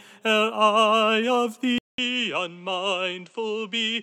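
At 1.78 s the recording likely switched its input to a poorer device, and it stays on that device to the end. A short gap of about 200 ms marks the switch. After it, the sound is narrower, with nothing above 8.7 kHz, so it turns duller and boxier. It also drops by roughly 5 dB, and a new background noise floor sits roughly 45 dB below the signal.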